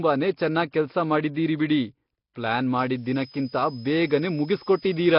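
From the first moment the speech carries heavy Nellymoser compression damage: a rough, hissy halo around every syllable and a smeared, underwater feel. The likely culprit is the old Flash microphone codec, which coded short blocks at a fixed, very low bit depth and filled bands it couldn't afford with noise. Nothing is left above about 5.3 kHz, and the overall quality fits a bitrate somewhere around 22 kbps.

Then at 2.78 s, right after "ಬಿಡಿ ಪ್ಲಾನ್", a switching supply whistle comes in and stays to the end. It's a high tone, roughly 5 kHz, moving within about 4.9 to 5.4 kHz. It sits roughly 25 dB below the speech. It sounds like a power supply running in an audible burst mode or beating against another one.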